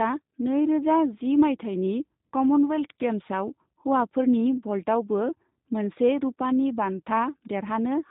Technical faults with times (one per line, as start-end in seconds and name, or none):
0.00-8.11 G.729 codec